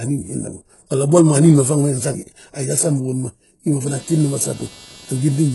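Throughout the speech the treble is rebuilt rather than carried: the upper band has a gritty, metallic quality, its harmonics fail to line up with those below the crossover, and nothing is present above 11.5 kHz. The coding damage is heavy. This is likely HE-AAC compression, where only the lower spectrum is coded and spectral band replication copies those bands upward under a coarse envelope. The extent of the damage points to a very low bitrate, on the order of 12 kbps.

From 3.87 s to the end of the clip, computer activity noise appears: a buzzing pulse train repeating at around 300 Hz, sitting roughly 25 dB below the speech. It starts abruptly and does not follow the speech. It arises when changing load on the processor, graphics card or similar hardware shifts the ground shared with the audio circuit, so the interference follows the machine's activity rather than the sound being recorded.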